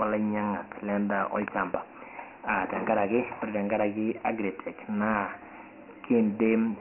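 Speech that sounds thin and boxed-in throughout, with a gritty, granular hiss riding on every syllable and falling away in the pauses. Nothing reaches above 3 kHz and the low end is trimmed, which marks Dialogic VOX ADPCM coding heavily applied. The 4-bit samples leave coarse quantisation noise that follows the speech level, and the 3 kHz ceiling fits a 6,000-sample-per-second rate, about 24 kbps, typical of phone-menu and voicemail storage.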